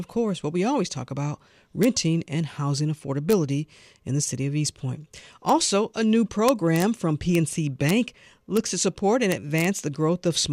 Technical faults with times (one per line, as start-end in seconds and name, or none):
1.83 integer overflow
3.31-3.33 integer overflow
5.49 integer overflow
6.48-6.82 integer overflow
7.35 integer overflow
7.89 integer overflow
8.57 integer overflow
9.32-9.64 integer overflow